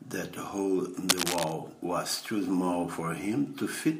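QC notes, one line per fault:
1.08–1.54 s, cable scratch noise: a dense, uneven scratching burst about as loud as the speech, after "hole in", likely a worn connector shifting.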